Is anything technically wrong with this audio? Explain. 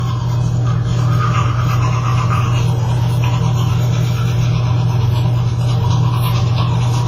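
Yes. Transcoding between lossy codecs runs throughout: the sound likely passed through a low-rate WMA-type encode before Opus, so smeared, swirly artefacts from both stack, and nothing remains above 15.6 kHz.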